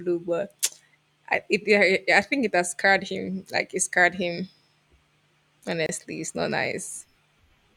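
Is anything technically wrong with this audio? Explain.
Yes. A gap at a join of encoded pieces appears at 5.86 to 5.89 s. Separately encoded segments were spliced without trimming encoder delay and final-frame padding, so a 28 ms gap with smeared edges interrupts the speech before it resumes where it stopped.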